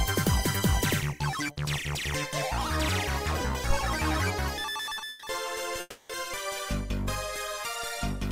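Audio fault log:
3.70–3.81 s: phantom power thump. A supply switched on a live input sends a voltage step through the coupling capacitors, giving a deep thump that dies away within about 24 ms.
5.09–5.24 s and 5.80–6.11 s: call audio freeze. The receiver's jitter buffer likely ran empty while packets were held up, so the last sound was stretched into a fading buzz or hiss for 130 ms, then 290 ms, ending in about 10 ms of silence. The audio then resumed where it stopped, with nothing lost and each gap pushing playback later.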